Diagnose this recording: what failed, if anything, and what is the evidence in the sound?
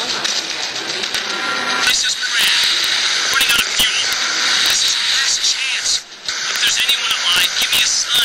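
Integer overflow in the fixed-point gain or sample-format stage: loud peaks that should have been limited wrap around to the opposite sign, so each one cracks instead of just flattening. You hear a crack at 1.15 s, then stretches at 1.87 to 1.91 s, 2.40 to 2.84 s, 3.34 to 4.13 s, 4.66 to 4.88 s, and 6.56 to 8.24 s. The overload is only about 1 to 3 dB, but any wrapped peak still jumps across the full range, which is what makes it sound so much sharper than clipping.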